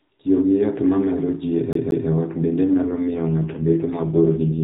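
From 1.73 to 2.09 s, right after "ma mero ji e", a fast, even stutter plays the same 0.18 s snippet twice, with a brief mute at each jump, before "e ot bende" resumes. This is the CD stuck on one turn: a scratch kicks the laser back one track at the same point each rotation.

From 2.74 s, just after "ji e ot bende", to the end, the narrowband phone sound, already lightly coloured by the AMR-NB codec, turns rougher, buzzier and more synthetic without any gap or change in bandwidth. This is an AMR rate drop, consistent with the link stepping down from 12.2 to 4.75 kbps.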